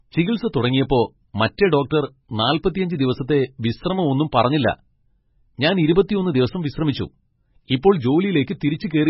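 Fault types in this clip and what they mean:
MP3 compression: The speech has nothing above 5.6 kHz and a heavily damaged, watery texture. Weak spectral detail flickers in and out from frame to frame, so s sounds turn swirly and metallic and consonant onsets smear. This is likely heavy MP3 coding. Short of bits, the encoder cuts the treble at a fixed point and discards quiet frequency lines, a degree of damage that fits a bitrate around 16 kbps.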